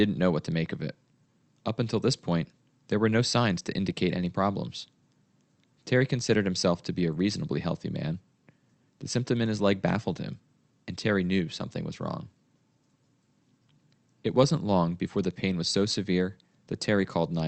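No faults are audible in this speech; the sound has the band-limited character of an ordinary call path, with nothing above about 8 kHz.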